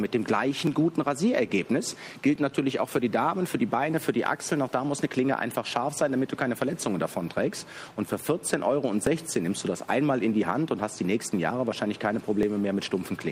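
Clock drift buffer slips run from 0.67 s to 12.43 s as a regular click every 1.68 s. The likely cause is two unsynchronised clocks differing by roughly 700 ppm, so a buffer periodically drops or repeats a block of about 70 samples.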